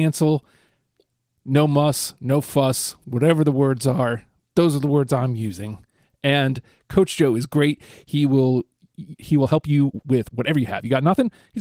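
Speech clip, and the trouble shows up right after "will he" at 9.39 s: from there to the end at 11.61 s the pace jumps to about 1.35 times normal while the pitch stays put, so it comes across rushed. That's a time-stretched section, likely software squeezing the tail to fit a length by dropping short slices of audio instead of resampling. The voice compression underneath, Opus at 24 kbps, leaves only light codec traces.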